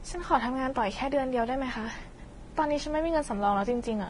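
Throughout the speech, the sound points to transcoding between lossy codecs, likely a low-bitrate Vorbis encode re-encoded as AAC-LC. The second codec spends bits reproducing the first codec's artefacts and adds its own, so the different artefacts are heard together, with nothing above 10.6 kHz.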